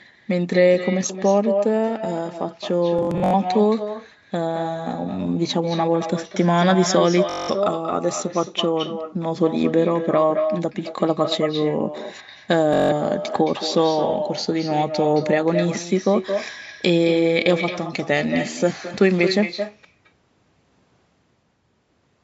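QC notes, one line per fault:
Throughout, echo with no canceller: every phrase is shadowed about a fifth of a second later by a thinner copy roughly 8 dB down, the far end's loudspeaker feeding its microphone uncancelled.
2.99 to 3.34 s, Bluetooth stutter: a rapid machine-gun buzz, longest repeating run near 85 ms, as lost or late packets make the receiver replay its last buffer, sound then resuming further on.
7.30 to 7.50 s and 12.74 to 12.93 s, Bluetooth stutter: shorter buzzy repeats of the same tiny slice, about 190 ms and 170 ms of audio lost, then playback picks up ahead.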